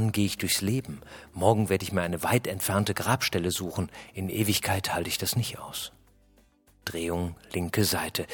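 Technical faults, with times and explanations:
No technical faults, with times and explanations, can be given, as none are present.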